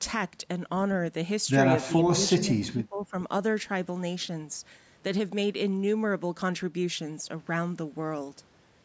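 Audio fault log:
1.86 to 2.2 s and 2.37 to 3.14 s: speech suppressed in double talk. The speech dips and breaks up in pieces, by about 15 dB in the first stretch and about 25 dB in the second. The likely cause is an echo canceller mistaking this talker for echo while both sides spoke.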